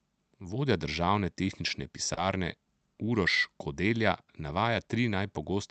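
Throughout the speech there is clock drift between sender and receiver: the sender's clock runs roughly 2 percent slow, so the jitter buffer keeps draining. Small, unevenly spaced timing hiccups result, seen on a waveform as tiny irregular joins rather than clean gaps.

At 2.14 to 2.19 s comes a short stall from a late packet. The buffer ran empty and the receiver stretched the last sound for 30 ms, so nothing is lost but a sound is held slightly too long. On a spectrogram the harmonics run flat and smeared for that moment.

From 3.63 to 5.28 s, repeated timing corrections play the audio at 98 percent speed, adding a few tens of milliseconds in total. The result is a faintly dragging, unsteady tempo. A waveform shows small repeated segments spread through the stretch, and on a spectrogram energy stops at the Opus call path's 8 kHz ceiling.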